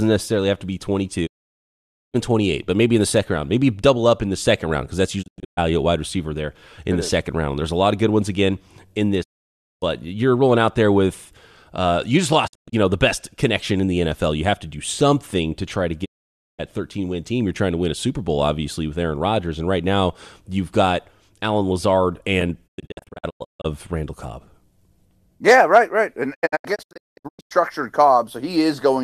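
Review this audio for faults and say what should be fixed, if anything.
Digital broadcast dropout mutes the speech with 20 ms fades at 1.25–2.16, 5.21–5.59, 9.22–9.84, 12.46–12.74, 16.04–16.61, 22.66–23.66 and 26.33–27.53 s. The second, fourth and last two break into short holes. The receiver discarded failed frames, so that audio is lost. Stronger reception or error protection would prevent it.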